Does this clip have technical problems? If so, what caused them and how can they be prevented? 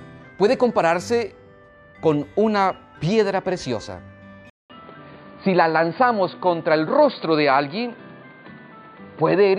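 Yes. At 4.50 s the sound drops out for about 200 ms, then continues to the end band-limited, with nothing above 4.7 kHz, a duller, boxier tone and a new noise floor roughly 30 dB below the signal, at a similar level. This is likely an input switched to a poorer device, such as a headset falling back to its call profile. Locking the input device in the recording software and disabling automatic device switching prevents it.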